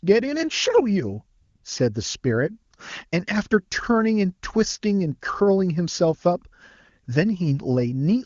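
From 1.41 to 1.63 s the sending phone's voice activity detection judged the talker silent and stopped transmitting speech frames for about 220 ms. This is AMR comfort noise: the receiver filled the gap with synthetic noise built from a rough estimate of background level and spectrum. The real background drops out and is replaced by a smooth, even hiss that switches in and then back out, around speech carried by the HD Voice AMR-WB codec.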